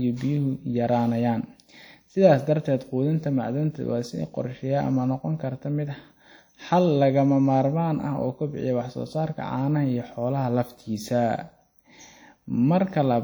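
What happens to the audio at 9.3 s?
At 9.3 s the speech carries the same damage heard across the whole clip, most likely WMA compression. A transform codec at a data rate that fits roughly 48 kbps spreads quantisation noise over tens of milliseconds around each syllable and drops weaker spectral lines. The result is plainly audible: ringing, a washy sound and a hiss that swells and fades with the level, while content reaches up to about 20.1 kHz.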